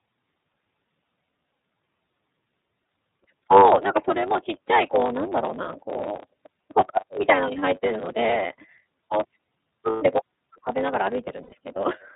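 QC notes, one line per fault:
Throughout: block size mismatch (truncated). The end of every block is discarded, which fits 512-sample blocks read short. This leaves a steady 100 Hz buzz and speech running 1.07 times fast at near-normal pitch. A spectrogram shows regular vertical seams every 10 ms, and the waveform shows small jumps there.
Throughout: iLBC codec. Narrowband coding removes everything above 4 kHz, so the spectrogram is bare above that line. Plainly audible rough, synthetic texture comes from excitation coded per frame, consistent with 30 ms frames in the 13.33 kbps mode. The waveform looks smoothed.
9.9–10.03 s and 11.43–11.53 s: lost iLBC frames. Gaps of 120 ms and 90 ms, fitting four and three 30 ms frames, are filled by a repeated final pitch cycle mixed with noise. This sounds like a held breathy vowel that recovers at once. The spectrogram shows flat repeated harmonics, and the waveform shows a periodic stretch.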